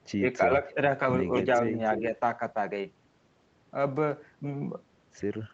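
Right at the start, from 0.18 to 0.24 s and again from 0.46 to 0.78 s, the speech dips by up to about 10 dB in short patches. That's speech suppressed in double talk, likely an echo canceller ducking the near talker while the far side spoke over it. Inside that second stretch, at 0.68 to 0.74 s, there's a faint echo leak, a delayed copy about 30 dB down, trailing the original by roughly 0.3 s, probably loudspeaker pickup the canceller missed. A stronger leak follows at 1.9 to 2.01 s, only about 10 dB below the speech with the same 0.3 s delay. Overlapping its end, from 1.99 to 2.16 s, the suppression returns with a milder dip of about 5 dB.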